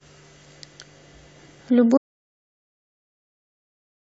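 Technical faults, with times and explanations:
1.98 s to the end: audio dropout to silence. The input feeding the recorder stopped delivering signal, likely through a disconnected device, a failed link or an accidental mute, while the recording carried on storing silence. The speech cuts off abruptly mid-flow at 1.98 s and never returns. The remaining two seconds are total silence, with not even room tone underneath, so anything said in that stretch is lost.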